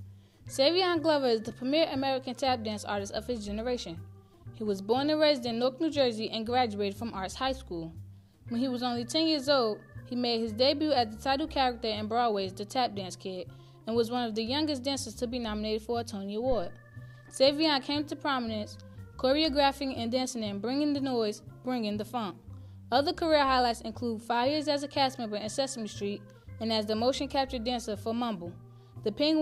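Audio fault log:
16.52–16.82 s, phantom power thump: a deep thump reaching about -24 dBFS with a 68 ms decay, as a supply switched on or off on a live input sends a voltage step through the coupling capacitors. Waveform: one slow offset swing. Spectrogram: a brief low-frequency smear.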